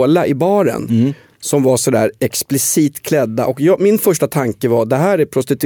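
Nothing in the speech stood out as a technical problem on listening.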